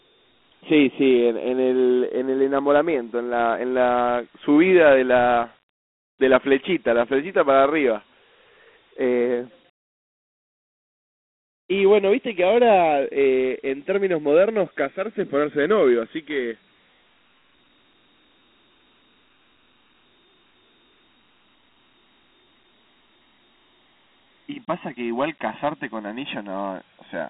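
It's a speech clip with two problems running the whole way through. First, the channels are drifting apart: a clock mismatch of around 50 ppm lets the delay creep to about a millisecond, so in mono you hear a slow flanging sweep. Second, Dialogic VOX ADPCM coding at 32 kbps leaves a phone-like band of 250 Hz to 3.5 kHz, nothing above 3.9 kHz, and a plainly gritty hiss riding the speech.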